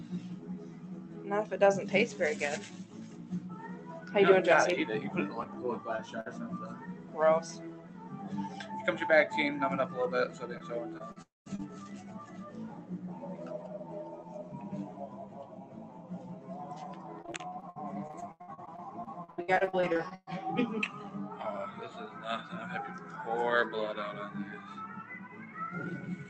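Non-speech audio carried over a call link, with highs stopping near 8 kHz as fits Opus at about 32 kbps. Throughout, a speech noise suppressor left on pumps held sound and tails by about 10 dB, while attacks pass. That uneven swing distinguishes it from plain compression. At 0.65–1.19 s, 2.72–3.48 s, 6.93–7.14 s and 15.63–16.10 s, sound cut by the noise suppressor sinks about 4 dB in steady or fading passages, unlike a dropout, because the sound never stops. Short concealed packet loss at 5.43–5.47 s and 5.97–6.00 s gives 20 ms smears where the last sound is briefly stretched, too short to become a held buzz. A burst of packet loss at 6.20–6.28 s drops 60 ms, with the continued sound fading before real audio resumes further on. Repeated packet loss (robotic sound) spans 10.58–11.64 s with five gaps, and 17.22–20.29 s with 28 gaps up to 119 ms, patching about a third of that stretch. It sounds choppy with pieces missing rather than smeared once. 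Within the first span, at 11.22–11.48 s, the sound fades into about 180 ms of silence before returning, likely a long network dropout, distinguished from the shorter losses by that silence.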